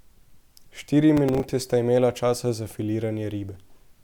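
Speech with processor overload crackle from 1.17 to 1.49 s: roughly seven missed 5 ms buffers replay stale audio, showing as hard-edged waveform steps and vertical spectrogram streaks.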